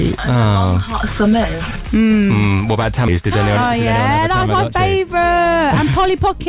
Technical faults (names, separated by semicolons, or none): skip ahead; jitter buffer speed-up